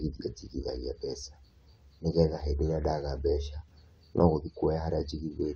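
Nothing technically wrong can be heard in the speech recording; the signal stays steady and intact throughout, with no audible disturbance at any point.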